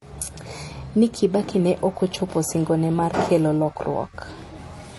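Speech, and the whole way through it carries the doubled-up artefacts of transcoding between lossy codecs. Nothing gets above about 11.5 kHz. The likely story is an MP3 pass somewhere around 48 kbit/s, then a re-encode to HE-AAC near 32 kbit/s. The second encoder wastes its small budget reproducing the first one's artefacts, then piles its own artefacts on top. The lowest band limit in the chain just carries through.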